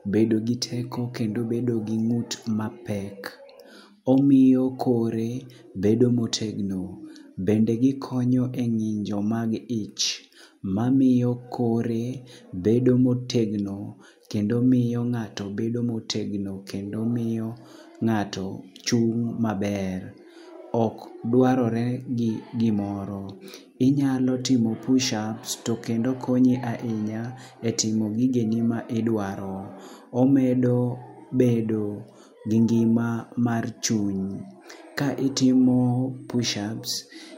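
No technical faults can be heard anywhere in the recording.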